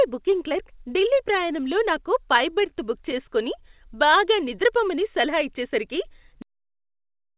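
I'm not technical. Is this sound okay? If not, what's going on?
No. There are two problems.

At about 2.69 s there is a short stall from a late packet. A piece of the call audio arrived late, so the receiver stretched the last sound for about 21 ms. You may hear a brief hold or buzz. Nothing is lost, but everything after it runs slightly late.

At 6.42 s there is a cut-off end. The recording stops in the middle of a sound, with no natural fade. It drops straight into dead silence, possibly with a click. That silence lasts to the end.

The narrow, phone-like sound with nothing above 4 kHz comes from the call line itself.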